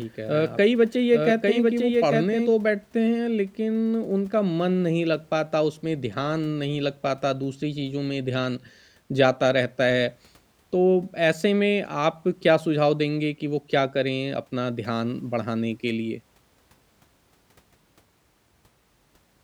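From the start to 2.54 s, the speech has a doubled audio track. A second copy runs about a second behind, a few decibels quieter. It has no room colour or decay. It likely comes from a second, slower capture path, and it cuts off abruptly.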